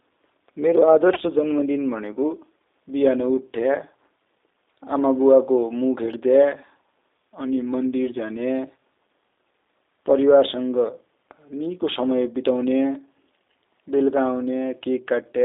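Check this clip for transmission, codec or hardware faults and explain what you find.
Two faults stand out in this speech: codec damage running the whole length, and one brief dropout early on.

G.729 codec, throughout. The audio has passed through G.729A, which fits an 8 kbit/s voice channel. Each 10 ms frame is rebuilt from a vocal tract filter, a pitch predictor and a few sparse pulses, so the voice sounds rough and synthetic. The band is held between 300 Hz and 3.7 kHz, giving a thin, boxy line sound with plainly audible codec damage.

VoIP packet loss concealed by the speech codec, 1.14 to 1.19 s, just before "जन्म दिन भनेको". About 20 ms of audio went missing, which fits one lost packet. The decoder filled the gap by extending its last pitch and filter settings at falling gain, so a short stretched smear replaces the real sound. Because each frame builds on the previous one, the voice stays weak or distorted as it resumes.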